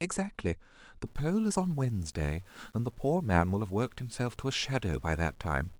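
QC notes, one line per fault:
1.07 s onward, low bit depth without dither: speech turns grainy, grit tracking the voice about 35 dB down, likely undithered rounding to around 9 bits.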